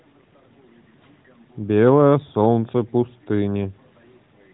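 No technical faults are audible.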